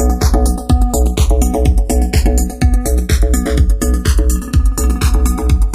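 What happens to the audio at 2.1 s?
At 2.1 s the channels are drifting apart, as they are throughout: left and right run on clocks disagreeing by roughly 100 ppm, so their offset keeps growing toward about a millisecond. Summed to mono, comb notches sweep slowly through the spectrum, giving a slow flanging.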